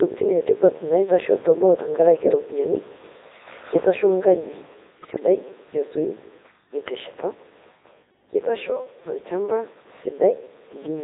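Throughout, the speech passes through a Codec 2 vocoder at 3.2 kbit/s. Only pitch, voicing, energy and a spectral envelope survive, and the decoder rebuilds everything from sine waves, so the voice comes out heavily robotic and buzzy, with the original waveform gone.

From 5.02 to 5.20 s, bit errors on digital voice radio strike, at a bit error rate of around 5 percent. Corrupted parameters set the pitch, level and tone colour of each frame in the burst, so the synthetic voice lurches and breaks into warbling, bleeping gibberish.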